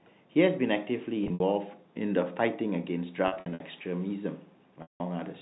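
Buzzy, held-over stretches with brief dropouts at 1.24 to 1.40 s, 3.28 to 3.60 s and 4.82 to 5.00 s: packet loss with pitch repetition, the receiver looping the last pitch period to bridge the gaps.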